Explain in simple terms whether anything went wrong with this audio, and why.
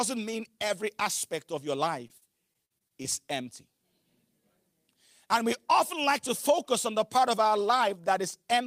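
Just after "every aspect of your", from about 2.07 to 3.06 s, there is repeated packet loss, giving a robotic sound. Seven small pieces go missing, none longer than 48 ms, and each is patched by stretching the sound before it. Unlike a single dropout, the patches come in quick succession, making it choppy.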